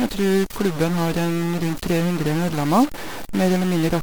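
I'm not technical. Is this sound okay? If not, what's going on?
No. The speech has a harsh, buzzy distortion all the way through. Even the pauses are filled with a steady, fairly loud hiss. This points to a stuck bit. One bit of the digital signal is likely jammed at a fixed value, so many samples come out wrong.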